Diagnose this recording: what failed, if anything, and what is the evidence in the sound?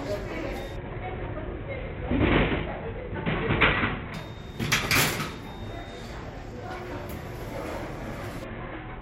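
The codec stage failed: a Bluetooth SBC bit pool drop from 0.76 to 4.14 s and again from 8.44 s to the end. Treble dulls and gritty noise rises, which fits the bit pool falling from 28 to 5, about 54 kbps, and starving the upper sub-bands. Unlike a plain low-pass, the grit separates it.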